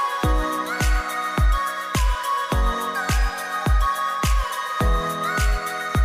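No technical faults are audible.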